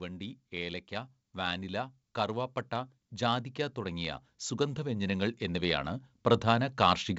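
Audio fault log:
0.52–7.13 s, automatic gain rising: the gain control judged the input too quiet and slowly raised its gain by about 12 dB, so speech and background swell louder together.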